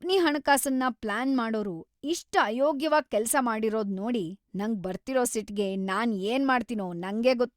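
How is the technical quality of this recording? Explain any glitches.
Nothing stood out on listening to this speech recording, and there are no glitches to explain.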